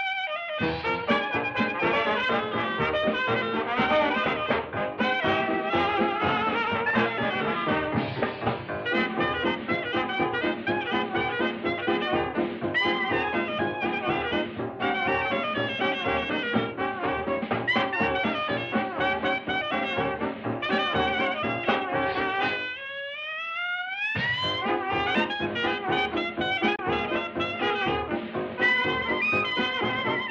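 At 26.75 s the sound briefly drops out, returning at 26.79 s. This is a digital broadcast dropout. The receiver stopped getting usable data, so it muted its output instead of playing corrupted audio. The sound fades down over about 8 ms and leaves a gap of roughly 24 ms, which fits a single lost frame. It is heard as one short, clean hole. Whatever was sent during that moment does not come back.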